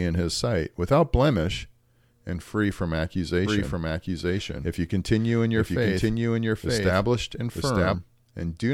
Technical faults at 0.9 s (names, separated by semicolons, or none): none